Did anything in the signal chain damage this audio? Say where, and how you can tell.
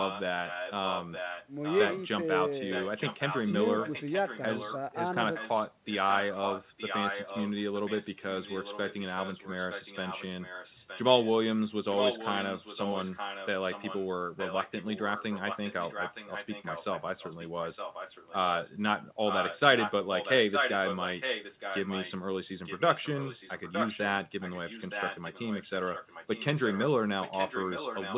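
Yes. An echo leak in call processing, likely an unsuppressed loudspeaker path, repeats the speech 0.92 s late, roughly 5 to 10 dB quieter, in stretches starting at 0.0, 2.7, 5.34, 11.9, 19.24, 22.64, 24.4 and 27.21 s. On a spectrogram, weaker copies of the harmonic patterns trail each phrase by that delay.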